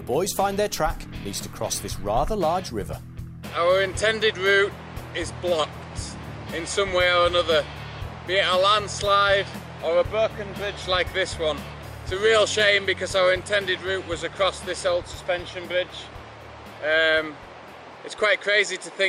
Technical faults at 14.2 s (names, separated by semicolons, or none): periodic clock jitter